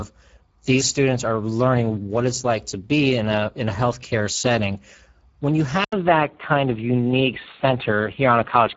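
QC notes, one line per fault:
Throughout: Speex codec. The speech has a plainly audible hoarse, noisy edge, since a CELP coder at around 9.8 kbps has few bits left for the excitation. Nothing survives above 7.7 kHz, and the top band is just shaped noise fill.
5.84 s to the end: input switched to a poorer device, likely. An 80 ms gap, then the sound turns dull and boxy with nothing above 3.8 kHz. The level stays about the same, and there's a new noise floor roughly 40 dB under the speech.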